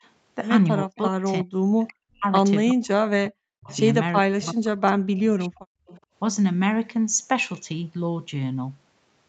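An echo canceller that likely mistook overlapping talk for loudspeaker echo produced speech suppressed in double talk, four times: 0.83–1.25 s, 1.43–2.25 s, 2.73–3.69 s and 4.24–5.78 s. Each time the speech sinks by up to about 40 dB, and the longest dip covers roughly a second and a half.

An echo leak follows at 5.87–6.01 s, likely because the far side's canceller let part of its loudspeaker pickup through. A faint copy of the speech returns about 366 ms late, roughly 25 dB below the main signal, as a brief scrap.

At 6.06–6.13 s the canceller clamped the microphone hard, producing background gated by the echo canceller. For about 70 ms the room sound drops by about 31 dB and then returns.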